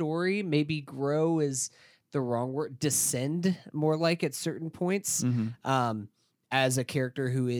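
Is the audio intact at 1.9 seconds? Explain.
Yes, the audio is intact at 1.9 s, with no fault at that moment.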